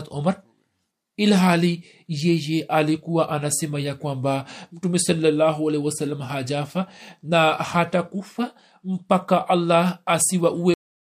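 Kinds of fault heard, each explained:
Cut-off end: the final buffers never reached playback, so the speech stops abruptly mid-sound at 10.74 s and drops straight to digital silence without any decay.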